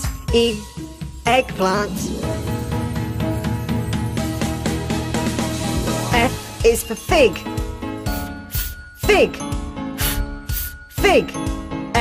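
Throughout the clip the sound carries MP2 compression damage: it is dull, with a gurgling, granular edge, which fits roughly 80 kbps. The likely cause is Layer II sub-band coding starving upper bands of bits. On a spectrogram, the top of the spectrum flickers off in blocky steps.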